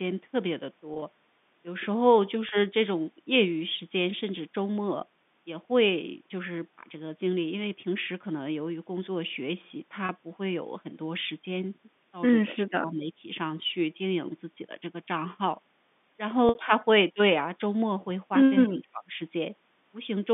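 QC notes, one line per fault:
0.94–1.02 s, 2.49–2.51 s, 10.06–10.09 s, 16.49–16.55 s: packet loss with pitch repetition. Gaps of 20 to 60 ms are bridged by repeating the last pitch period, giving a brief held buzz.
12.51–13.26 s and 18.65–19.19 s: speech suppressed in double talk. Level sinks around 25 dB and thins in pieces for roughly half a second or more, likely from an echo canceller ducking during overlapping talk. These dips are longer than the packet-loss gaps and carry no buzz.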